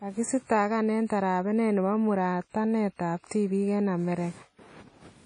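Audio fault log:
Throughout, WMA compression: the speech was likely passed through a low-bitrate transform codec, consistent with an early Windows Media Audio encoder at around 32 kbps. Quantisation noise smears across long blocks and weak detail is discarded, leaving a ringing, washy sound with breathing hiss and nothing above 10.1 kHz.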